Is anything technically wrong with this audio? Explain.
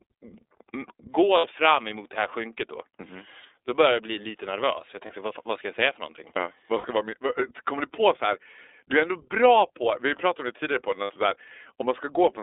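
Yes. The speech has been through the iLBC codec the whole way. The band sits roughly between 300 Hz and 3.7 kHz, so there's no air or sibilance on top and a thin low end. The coding damage is plainly audible: a slightly rough, synthetic grain on the voice. The texture fits iLBC's 30 ms frame mode at around 13 kbps, where each frame's excitation is coded on its own, which gives the speech that slightly manufactured edge.

There are also four short spots of lost iLBC frames: 1.38 to 1.45 s, 5.07 to 5.11 s, 6.78 to 6.86 s and 11.04 to 11.11 s. The gaps run about 60 ms, 30 ms, 60 ms and 60 ms. In each one the decoder papers over the missing audio by repeating the last pitch cycle with some noise mixed in, so you hear a brief held, buzzy-breathy vowel instead of a dropout. Since the frames don't depend on each other, the voice snaps back right after each gap.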